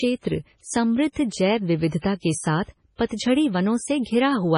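Likely heavy MP3 compression, suggesting about 24 kbps, starves the speech of bits throughout: nothing survives above 10.5 kHz, and the sound turns watery, swirly.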